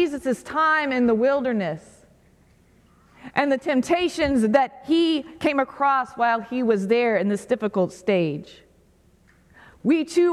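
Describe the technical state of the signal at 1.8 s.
At 1.8 s the signal is intact, with no dropout, distortion, glitch or other fault audible at that moment.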